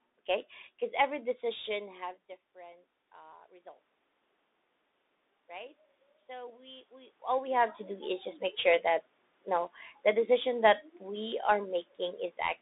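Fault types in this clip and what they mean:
Bluetooth CVSD headset codec: The whole clip passes through this narrowband headset codec. It sends one bit per sample, saying only up or down, with a step size that adapts, which fits a 64 kbps link. Nothing above about 3.7 kHz gets through, and the low end thins below about 250 Hz. The damage is plainly audible. S sounds turn scratchy, loud bright moments distort, and a grainy hiss sits under the speech.
Automatic gain rising: The level control hears the input drop by about 21 dB and slowly raises its gain to compensate. This happens twice. From 1.73 to 3.85 s, just after "okay because every", the gain climbs by about 5 dB. From 5.47 to 7.22 s, just before "all we have to", it climbs by about 4 dB. Speech and background noise swell together across each stretch, and the first follows a moment where the talker moves back from the microphone.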